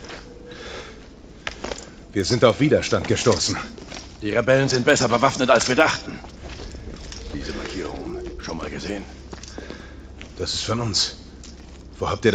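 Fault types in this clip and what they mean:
Resampler restarted on every block: each 100 ms block converted separately ticks at its edges, 10 per second, showing as evenly spaced vertical spectrogram lines.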